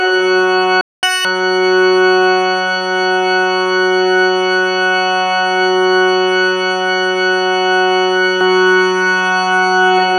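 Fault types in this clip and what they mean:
Playback stall: at 0.81 s the sound cuts to silence for about 0.22 s, likely the player running dry or its thread getting blocked, then resumes.
Catch-up at higher speed: from 1.03 to 1.25 s the backlog plays at double speed, pitch jumping about ten semitones, before snapping back to normal.
Doubled audio track: from 8.41 s to the end, a dry copy arrives abruptly about half a second behind at roughly equal level, likely a second capture path.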